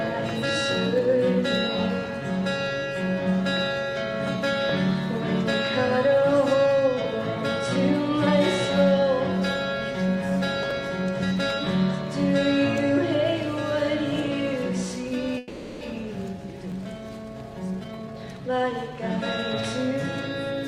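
The sound has overlapping chunks, heard as brief clicks at 4.69, 10.71 and 16.72 s, exactly 6 s apart. At each join about 12 ms of audio plays twice because each 6 s chunk begins slightly before the previous one ends. On a waveform, each join shows a small repeated fragment and a discontinuity. On a spectrogram, it shows as a thin vertical line. A call audio freeze from 15.38 to 15.83 s stretches the last sound into a fading buzz for about 430 ms before the audio resumes where it stopped. The likely cause is delayed packets emptying the jitter buffer, which inserts a gap without losing anything. A spectrogram shows smeared, flattened bands with no new detail. Later, a jitter buffer speed-up from 17.43 to 18.92 s makes the sound run about 124% fast at unchanged pitch, so it feels hurried. Around 0.4 s is trimmed in many tiny pitch-period cuts to work off the built-up delay. The waveform looks compressed in time, and the spectrogram shows horizontally squeezed events with intact frequency spacing.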